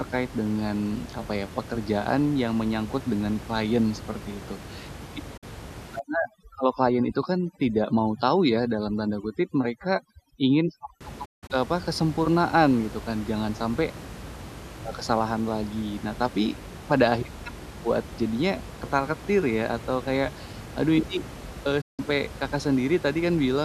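At 5.37 s the sound is muted for about 48 ms. This is a digital broadcast dropout: the receiver stopped getting usable frames, faded out over roughly 8 ms rather than clicking, and came back at 5.43 s. The length fits two lost frames of about 24 ms each. On a waveform the envelope ramps quickly down to near silence. On a spectrogram a thin vertical strip goes completely empty, room noise included.

From 5.99 s to 11.01 s there is overdone noise removal. The room noise, about 15 dB below the speech elsewhere, drops and breaks up, leaving scattered twinkling specks. Quieter components of the speech are cut along with the noise. On a spectrogram the background becomes a dark field with isolated flickering dots, and the edges of the speech harmonics look patchy and moth-eaten.

The dropout comes back twice. From 11.25 s to 11.51 s, just before "eee apa kesempurnaan gitu", it punches several short holes spread over about 240 ms. 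These total about 192 ms, and the longest is about 168 ms. At 21.81 s, right after "kayak aduh ini eee", a single silence of about 168 ms lasts until 21.99 s. Both show the same fast fade and the same flat, fully empty gaps.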